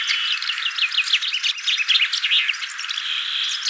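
Nothing's wrong with this one: the sound comes over a call connection with no faults, and the top end stops at 8 kHz, which is what you'd expect from a wideband call codec like G.722.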